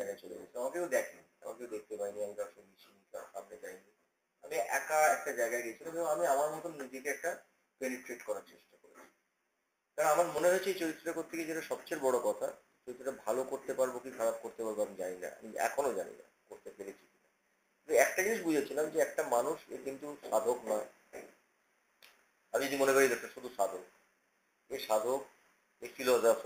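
From the start to 10.38 s the audio sounds hollow and phasey, the mark of channel delay (comb filtering). One channel arrives roughly 10 ms late, so the mono sum cancels at evenly spaced frequencies, the lowest near 40 Hz. Unlike flanging, these notches never sweep.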